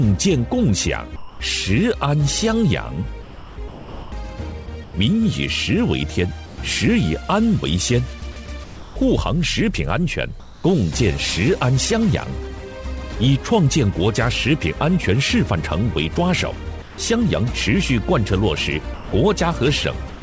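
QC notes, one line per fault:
1.16–1.40 s, 16.82–16.98 s, 18.94–19.12 s, 20.10–20.22 s: sound dropped by the voice detector. Sound cuts out into steady hiss, losing 80 to 170 ms each time. The detector likely mistook quiet sound for background and stopped sending.
3.22–4.94 s, 8.32–8.96 s: sound chopped by the voice detector. Sound flickers on and off, with 920 ms and 380 ms filled by flat noise. Sending was likely switched repeatedly.
6.46–6.58 s, 10.40–10.64 s: comfort noise in place of the background. Background turns smooth and featureless, within about 1 dB. It sits about 20 dB below loud parts, likely synthetic fill during a pause.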